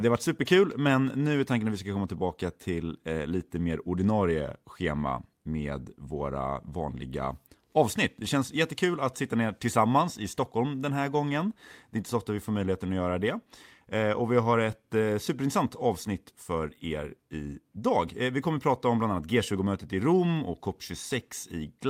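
A speech recording with nothing technically wrong with it.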